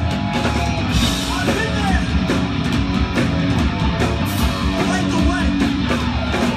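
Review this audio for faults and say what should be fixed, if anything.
Compressed frames skipped at 1.58 s and 4.21 s: the sound jumps forward by about one frame at the first point and about two at the second, losing roughly 20 ms and 50 ms of audio. The frames here are 23.2 ms long. The missing frames were either absent from the file or rejected by the decoder as damaged. To prevent this, verify the encoded file's integrity after encoding and transfer, and re-encode from the source if any frames fail.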